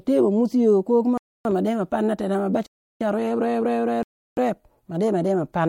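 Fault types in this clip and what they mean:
Block of digital silence at 1.18–1.45 s (after "ko kuma"), 2.67–3.01 s (after "tenah ma") and 4.03–4.37 s: the speech cuts out abruptly to silence for 0.28–0.34 s, which points to unfilled output buffers, the two longer gaps fitting 16384-sample blocks.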